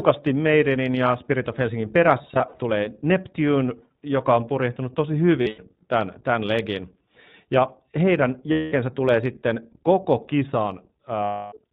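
iLBC codec, throughout: the speech is cut off above 4 kHz and plainly rough and synthetic, as expected from 15.2 kbps coding in self-contained 20 ms frames.

Lost iLBC frames occur at 2.22 to 2.58 s, at 5.42 to 5.61 s (between "joka on purjehtunut tosi" and "tämän tämän legin"), at 8.52 to 8.74 s (just before "tulee sitten koko"), and at 11.24 to 11.54 s. The decoder fills about 140, 140, 200 and 280 ms of missing audio by repeating the last pitch cycle mixed with noise. Each gap sounds like a held, buzzy vowel, and the speech snaps back immediately afterwards.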